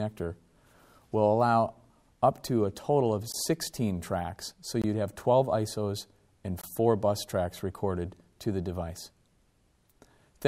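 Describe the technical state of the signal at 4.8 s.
At 4.82 to 4.84 s the signal drops into a block of digital silence about 21 ms long, which fits a 1024-sample buffer at 48 kHz that the program failed to fill in time. The signal cuts out and returns with no fade, so it registers as a short hole. Unlike a gain dropout or concealed packet loss, nothing smooths or masks the gap.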